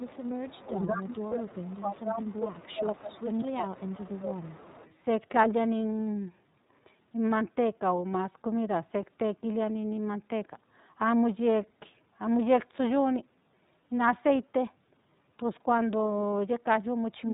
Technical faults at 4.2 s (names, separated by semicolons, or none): iLBC codec; echo leak; speech suppressed in double talk